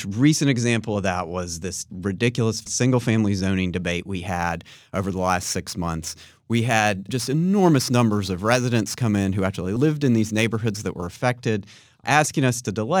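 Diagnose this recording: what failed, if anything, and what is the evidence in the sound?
Between 4.27 and 11.21 s there is crude rate conversion at the sample-format conversion stage: a gritty, inharmonic fizz that rides on loud and high-frequency sound. It fits a 48 kHz to 44.1 kHz change done by nearest-sample picking, which drops one sample in roughly every twelve with no filtering. The error sits at roughly 25 dB below the signal. A spectrogram would show unrelated, shifted copies of strong components, and the waveform would show small steps in a regular pattern.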